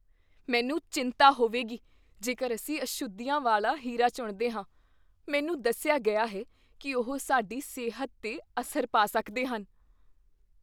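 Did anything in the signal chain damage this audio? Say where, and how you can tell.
No, nothing in this speech recording stood out on listening as a sign of damage at any stage of the chain.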